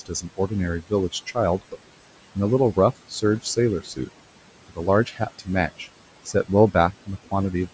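Noise suppressor artifacts run through the whole clip. The suppressor pulls down whatever bands it judges to be steady background by about 18 dB, frame by frame, so the room noise, sitting about 16 dB under the speech, drops away in the gaps and comes back beneath each phrase. The speech itself stays within its 8 kHz call bandwidth.

Speech cut by the noise suppressor happens three times, where the suppressor mistakes parts of the speech for noise and attenuates them along with the background. Between 0.00 and 1.75 s, roughly 0.4 s in total is turned down, by as much as about 18 dB. Between 3.09 and 4.09 s, a shorter stretch of roughly a fifth of a second drops by up to about 14 dB. From 4.69 to 5.87 s, again roughly 0.4 s loses up to about 17 dB. In each span, soft consonants, word endings or a quiet phrase sound swallowed or faint.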